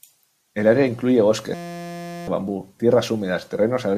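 A steady buzz at about 172 Hz replaces the speech from 1.54 s to 2.28 s, right after "área incluye". It is a system hang loop: the computer or driver stalled while the audio hardware kept replaying the same 5.8 ms slice of its ring buffer, which fits a 256-sample buffer, over a hundred times in a row. Because the repeated slice is so short, the repeats fuse into a pitched tone rather than a stutter, and roughly 0.7 s of speech is lost beneath it.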